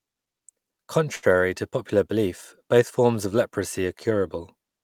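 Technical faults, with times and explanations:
1.15 to 1.25 s, short stall from a late packet: one packet showed up late, the jitter buffer ran dry, and the receiver stretched the last bit of speech for about 73 ms, so it hangs there with a faint buzz or dip. Nothing's lost, but everything after runs 73 ms behind.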